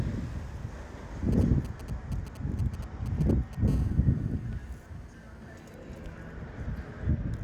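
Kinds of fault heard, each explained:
GSM signalling bursts: From 1.3 to 3.7 s, a galloping dit-dit-dit of brief 217 Hz buzzes sits only around 20 dB under the sound. A nearby 2G phone is sending short groups of radio bursts while signalling, and the audio circuitry rectifies them.
GSM phone buzz: From 3.7 to 5.7 s, a steady, hard, raspy buzz at 217 Hz, rich in harmonics and unrelated to the sound, runs about 31 dB below it. The phone has moved into a call, transmitting 217 bursts per second that the circuitry rectifies.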